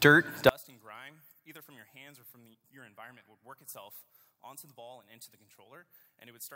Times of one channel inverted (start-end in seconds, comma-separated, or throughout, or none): 0.49-6.56